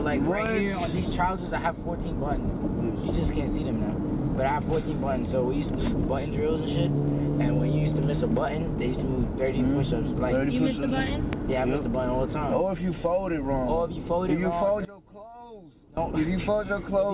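A loud pop at 0.46 to 0.49 s and again at 11.33 to 11.35 s, likely an electrical transient such as a switch or static discharge, rises about 15 dB above the sound. Each shows as a single tall spike in the waveform and a thin full-height vertical line on the spectrogram, reaching up to the 4 kHz ceiling of the telephone-band call codec. From 14.85 to 15.97 s, one channel inverted, likely a polarity flip, makes the mono sum collapse by about 20 dB, leaving a faint residue. The waveform shrinks sharply there, and the spectrogram fades.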